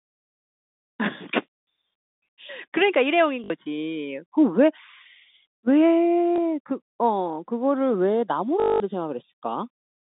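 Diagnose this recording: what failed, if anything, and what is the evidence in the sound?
The network stage dropped speech packets, and the receiver concealed each gap with packet loss with last packet repeated, replaying the final good packet until new ones arrived. This happens at 3.44–3.5 s (60 ms), 6.36–6.38 s (20 ms) and 8.6–8.8 s (200 ms), lengths that fit 20 ms packets. Repeats ignore the pitch cycle, and the 8.6 s run buzzes robotically at 50 Hz. A waveform shows one 20 ms shape tiled identically. A spectrogram shows frozen harmonics within the 200 Hz–3.7 kHz telephone band.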